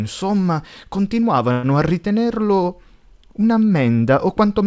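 At 1.52–1.66 s a call audio freeze drags the last sound into a fading buzz, likely from an emptied jitter buffer; the spectrogram shows flat, smeared bands.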